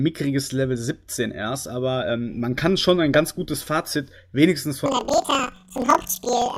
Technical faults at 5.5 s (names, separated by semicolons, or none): planar audio read as interleaved